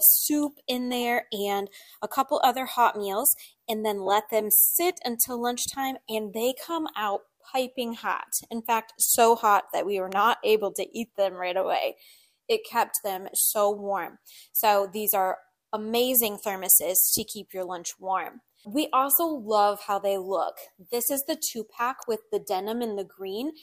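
A sharp, isolated snap cuts across the sound at 10.12 s, peaking around -20 dBFS, and a slightly quieter one follows at 22.02 s. These are likely electrical switching spikes, brief arcs from a nearby switch, motor or static discharge picked up by the audio line.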